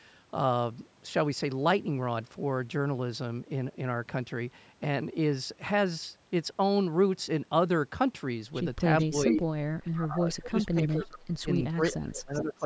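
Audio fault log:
8.99–9.41 s, 10.31–10.47 s, 10.88–11.08 s, 11.54–11.95 s, 12.34–12.54 s: echo leak. A copy of the speech returns about 430 ms late, first as loud as the original and later 10 to 30 dB quieter, likely from a loudspeaker echo the canceller missed. The fixed delay separates it from room reverberation.
9.05–9.14 s: speech suppressed in double talk. The speech dips by about 20 dB for roughly 100 ms and then recovers, likely because the canceller ducked everything during the echo overlap. It is a level drop, not a silent dropout.
9.89–12.65 s: speech suppressed in double talk. About 2 s of the speech is pushed down by up to 25 dB in pieces alongside the later echoes, likely the same ducking repeated. The level changes follow the overlaps, not packet timing.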